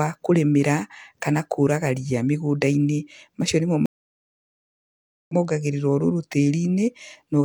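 At 3.86 s a stream reconnect cuts the speech to flat silence for 1.43 s, ending at 5.34 s. It resumes about a second and a half later in the content. The waveform shows a blank gap and a restart that fades in.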